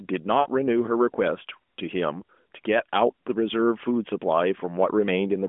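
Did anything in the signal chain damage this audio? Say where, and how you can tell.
Yes, at the network stage, where lost AMR speech frames cause a gap from 0.40 to 0.48 s. For about 60 ms, which fits three 20 ms frames, the decoder had no valid data and repeated the last good pitch and vocal-tract settings at falling gain. You hear a drawn-out, fading warble. On a spectrogram the harmonics stretch flat and dim across the gap inside the narrowband 200 Hz to 3.5 kHz line band, and the waveform envelope sags before speech recovers.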